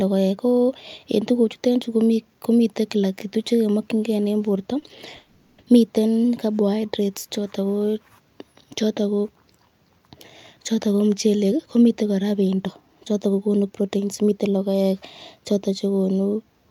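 At 4.79 to 4.84 s there is a short stall from a late packet. One packet missed its playout time and the jitter buffer ran dry. The receiver stretched the last bit of sound to cover the gap, then carried on from the same point. About 30 ms was filled in and nothing was lost. You hear a brief held sound with a faint buzz. The delay grows by 30 ms.

At 5.16 to 5.60 s comes a call audio freeze. The speech stops moving forward and the last sound is drawn out as a buzzy, hissing tail that fades but never reaches silence. About 420 ms is filled this way. Then the speech resumes exactly where it stopped, with nothing missing. The likely cause is packets held up in transit, draining the jitter buffer. The delay grows by 420 ms.

From 10.86 to 14.74 s there is a jitter buffer speed-up. The buffer held more audio than its target, so the receiver trimmed it back. It cut many tiny slices, each a pitch period or a few, one after another. 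Around 0.4 s is removed in all. Playback runs at 109 % speed with the pitch unchanged. The speech sounds hurried.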